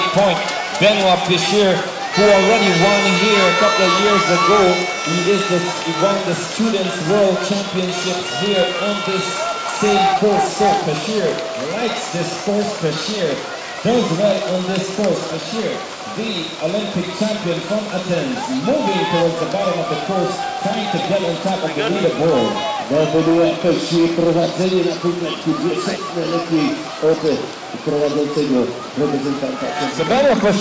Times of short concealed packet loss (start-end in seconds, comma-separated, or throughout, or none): none